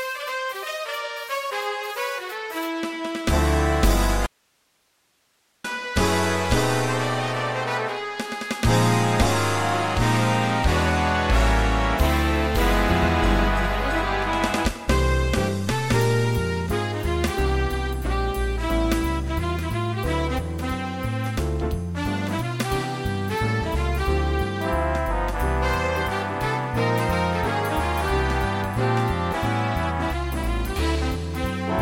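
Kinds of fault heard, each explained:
Audio dropout to a faint residue: from 4.26 to 5.64 s the sound cuts abruptly to faint hiss far below normal level, likely a signal loss while the path stayed live.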